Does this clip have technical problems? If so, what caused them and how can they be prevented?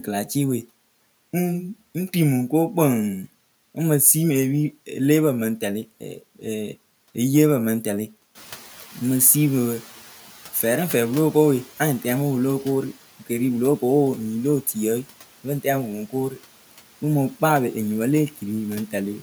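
Yes. From 8.35 to 11.65 s the noise suppressor is catching up: the room noise steps up by about 12 dB around 8.5 s, and the suppressor's noise estimate takes 3.3 s to follow, so the louder background passes with less reduction at first before sinking by about 8 dB. A suppressor with faster noise-floor tracking, or a shorter adaptation window, would prevent this.

Between 16.1 and 16.4 s there is speech cut by the noise suppressor: it treats low-level speech as background and attenuates it by up to about 12 dB over roughly 150 ms, so that stretch sounds swallowed and faint. A less aggressive suppression setting, or a speech-presence detector that protects quiet speech, would prevent it.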